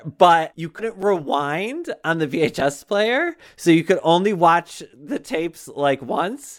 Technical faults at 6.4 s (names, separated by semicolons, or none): none